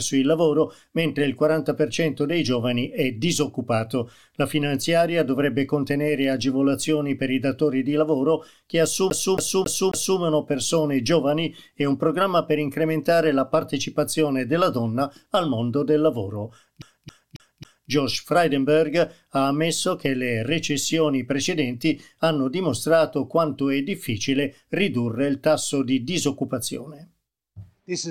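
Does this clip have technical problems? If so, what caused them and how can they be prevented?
Yes. At 9.1–10.19 s and 16.82–17.91 s the CD is stuck on one turn: a scratch kicks the laser back, so a 0.27 s slice repeats four times, muted at each jump. That even, gapped stutter sets it apart from irregular packet-loss repeats. Cleaning or resurfacing the disc, or ripping it with error-correcting software, prevents this.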